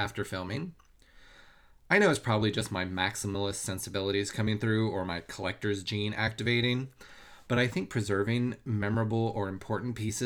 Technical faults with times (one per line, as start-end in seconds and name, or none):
none